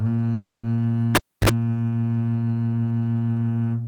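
A music clip with two faults. From 0.33 to 0.65 s a call audio freeze stretches the last sound into a fading buzz for about 300 ms, likely from delayed packets. Nothing is lost, and the music simply resumes late. From 1.15 to 1.49 s a cable pulled and plugged in brings a pop, about 0.29 s of near silence, roughly 47 ms of 50 Hz mains buzz and a second pop, unlike the freeze's smooth continuation.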